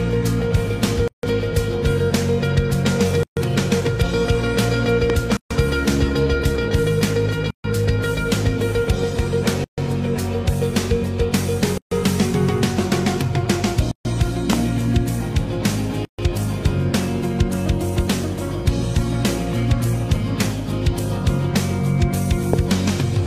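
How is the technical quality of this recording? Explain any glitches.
The recording has two recurring faults: gaps at joins between separately encoded pieces, and three loud pops.

Gap at a join of encoded pieces: 1.08–1.23, 3.23–3.37, 5.37–5.51, 7.51–7.64, 9.64–9.78, 11.78–11.91, 13.91–14.05 and 16.05–16.19 s. The first gap is 155 ms and the rest are 136 ms, with 2 s of sound between them. Each piece keeps its encoder start delay and padded final frame, so the continuous sound drops out and then resumes where it stopped.

Loud pop: single pops at 5.10–5.12, 14.53–14.55 and 22.53–22.56 s. The first two are about 15 dB above the surrounding sound and the last is about 20 dB above it. They are sharp transients over the sound, which carries on underneath. The likely cause is a voltage step or pulse from a plug, switch, static discharge or driver glitch.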